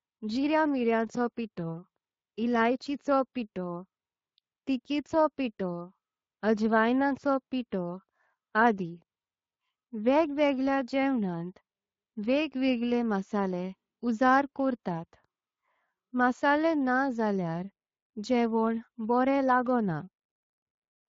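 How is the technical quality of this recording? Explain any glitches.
The recording has clearly audible codec damage for its full length, with no separate glitches standing out.

Speex codec, throughout the clip: the speech has the grainy, hoarse texture of a CELP speech codec. The codec models the voice as a filter driven by an excitation signal chosen from a limited codebook. With a modest bit budget, the excitation is only roughly matched, so a noisy, rough layer rides on the voice. The strength of this points to a Speex setting at about 20 kbps.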